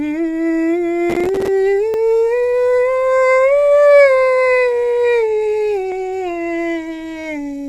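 A music clip in which the processor falls behind between 1.10 and 1.48 s, missing about twenty audio buffer deadlines over that stretch, which fits buffers of roughly 5 ms. Each miss drops in a hard-edged sliver of silence, so the passage turns into a gritty processor overload crackle that stops once the load clears. Later, overlapping time stamps between stream segments make the player trim away audio that was never duplicated, at 1.94 s and again at 5.92 s. The roughly four-second spacing fits 4-second segments, and each overlap between stream segments is heard as a tiny skip where the waveform jumps.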